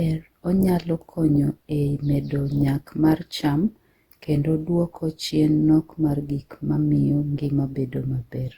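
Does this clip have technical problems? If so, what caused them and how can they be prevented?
Yes. Generation loss runs through the whole speech clip. The sound is swirly and hollow, with smeared detail and blurred attacks. This is more damage than one pass at this bitrate would cause. The likely cause is repeated lossy coding, about ten rounds of decoding and re-encoding, which fits Opus at 64 kbit/s. Each pass quantises again on a shifted frame grid, so noise piles up. Content still reaches 20.3 kHz. To prevent it, keep a lossless master and encode to the lossy format only once.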